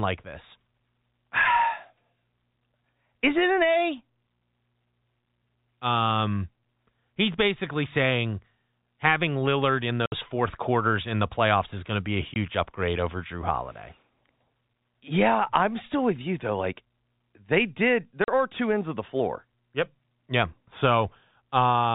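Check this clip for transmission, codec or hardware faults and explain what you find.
The clip has one transmission fault, packet loss filled with silence, heard at 10.06, 12.34 and 18.24 s. The speech stays band-limited below 4 kHz, as telephone coding does.

Lost packets were replaced with silence. Holes of 60, 20 and 40 ms cut the speech, which fits 20 ms packets. Each hole has hard edges.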